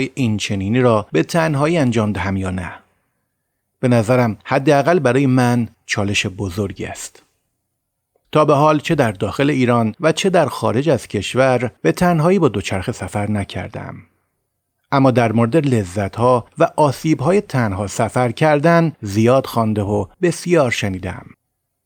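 No technical faults can be heard anywhere in the recording; the speech signal stays steady and intact throughout, with no disruptions to its level, timing or continuity.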